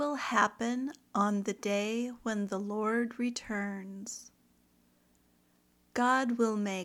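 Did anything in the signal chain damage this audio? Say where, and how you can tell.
No, there's no audible damage from any stage of the chain, from capture through playback.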